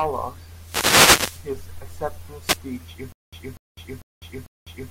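Wireless microphone noise hits at 0.51 to 1.57 s and 2.42 to 2.61 s: the FM radio link fades as reflections cancel, so receiver noise swells into a swish of static over the speech.

Stutter with silent gaps from 3.12 s to the end: a 244 ms fragment repeats four times, each followed by about 203 ms of digital silence, every 447 ms. This is likely a stalled stream replaying its last buffer, and the intervening speech is lost.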